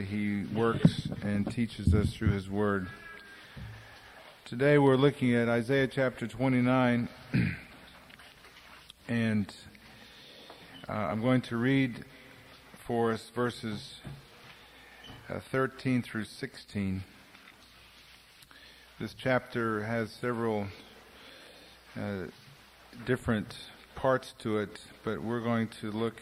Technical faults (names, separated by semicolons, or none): none